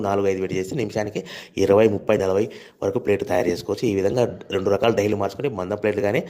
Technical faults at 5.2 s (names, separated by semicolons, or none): none